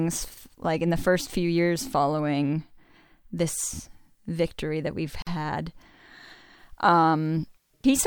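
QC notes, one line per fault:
5.22–5.27 s, gap at a join of encoded pieces: a silence of about 47 ms cuts into the continuous speech, then the sound resumes where it stopped. Separately encoded segments were joined untrimmed, leaving encoder start delay and final-frame padding, with smeared edges.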